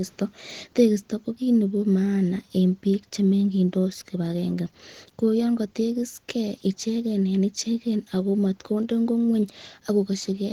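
From start to finish the speech sounds hoarse and muffled, with a rough, grainy, noisy texture on voiced sounds, the plainly audible damage of Opus compression, likely in its hybrid speech mode at a rate that fits about 16 kbps. A spectrogram shows harmonics blurred into noise-like bands, with the upper range filled by smooth noise rather than clear structure; the waveform looks ordinary.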